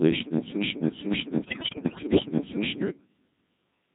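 From start to finish the speech has passed through the Codec 2 vocoder, which fits its 1.6 kbit/s mode. Only pitch, voicing, energy and a coarse spectral envelope survive, and the decoder rebuilds the voice from sine waves, so it sounds heavily robotic and buzzy throughout.

From 0.62 s to 2.81 s a broken-record loop takes over. The stream likely stalled and kept resending its last held fragment, so a piece about 0.5 s long plays four times back to back, and the audio due in that stretch never arrives.

Inside the loop, from 1.44 s to 2.26 s, bit errors on digital voice radio hit the low-rate frames. Roughly one bit in seven is flipped, corrupting each frame's pitch, level and spectrum. The synthetic voice lurches in pitch and loudness and breaks into warbling, bleeping gibberish.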